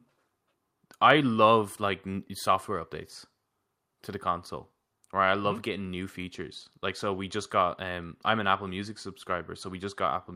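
No technical faults are audible.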